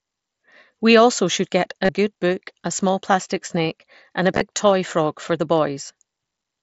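Concealed Bluetooth headset packet loss shows up three times: 1.85 to 1.89 s, a scattered patch from 4.35 to 4.41 s, and a blip at 5.88 s. The phone filled missing packets by looping the best-matching recent waveform, giving brief buzzy held tones and a slight warble when real speech resumes.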